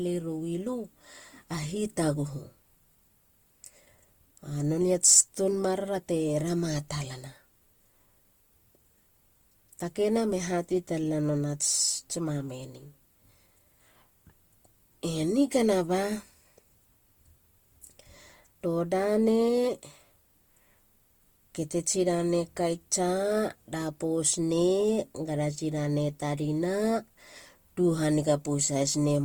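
Across the whole clip the speech carries plainly audible coding damage, most likely Opus compression in its music mode. Every frequency band keeps its energy. But there are too few bits to describe the fine detail, so the encoder fills the gaps with folded copies of lower bands or with noise. Voiced sounds therefore turn rough and grainy rather than swirly. The bandwidth stays full, with content up to about 20.1 kHz, and the damage fits a low rate near 24 kbps.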